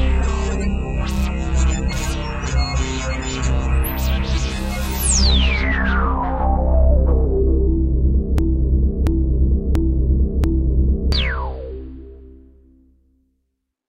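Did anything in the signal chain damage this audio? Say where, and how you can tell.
Yes. A broken-record loop runs from 8.38 s to 11.12 s. One 0.68 s fragment plays four times, exactly and back to back. The likely cause is a stalled player, encoder or stream resending its last held fragment. The audio for that span is lost.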